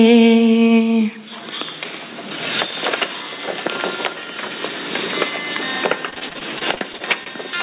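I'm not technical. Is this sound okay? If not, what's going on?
No. Repeated packet loss (robotic sound) from 6.1 to 7.3 s: about a dozen brief dropouts are papered over by stretching the previous sound, leaving it choppy and robotic.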